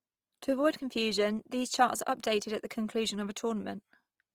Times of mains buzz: none

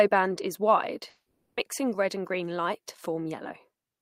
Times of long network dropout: 1.09-1.59

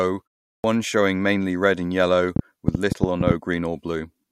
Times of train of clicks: 2.36-3.32

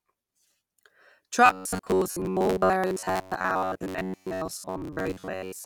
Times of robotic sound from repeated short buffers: 1.46-5.65

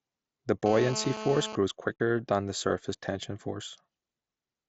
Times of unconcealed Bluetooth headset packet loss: 1.98

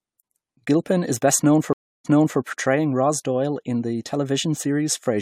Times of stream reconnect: 1.73-2.39

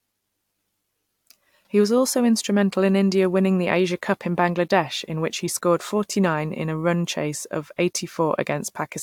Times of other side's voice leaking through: none

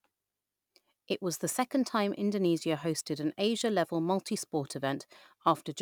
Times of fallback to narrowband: none

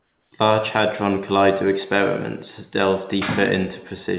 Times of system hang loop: none

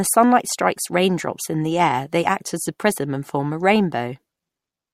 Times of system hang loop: none

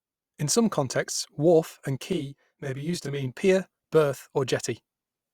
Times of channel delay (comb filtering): 2.13-3.35

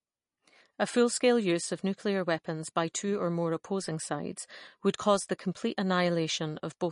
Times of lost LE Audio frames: none

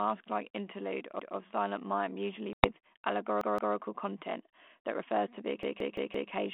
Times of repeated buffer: 1.19-1.37, 3.41-3.75, 5.63-6.31

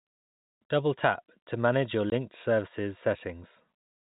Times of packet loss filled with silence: 2.10-2.12

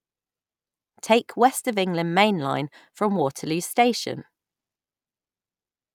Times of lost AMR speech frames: none

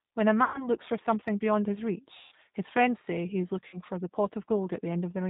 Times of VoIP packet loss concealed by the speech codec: 0.44-0.69, 2.17-2.34, 3.67-3.79

